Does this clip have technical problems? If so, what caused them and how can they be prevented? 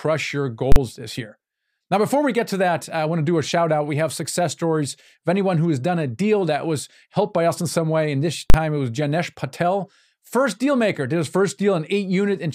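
Yes: invalid numbers at full scale cause two loud bangs at 0.72 s and 8.5 s, where 40 ms blocks of infinite or invalid values hit maximum level. On the waveform these show as flat slabs held at one extreme value, far beyond the speech peaks, and on a spectrogram as bright broadband vertical stripes. To prevent this, check each processing block for invalid values and replace them with silence before output.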